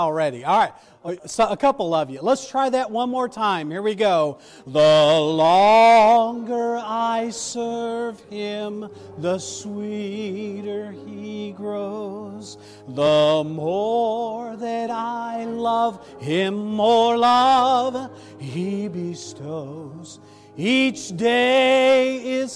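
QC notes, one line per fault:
Nothing to flag here, since no faults turned up anywhere in the clip.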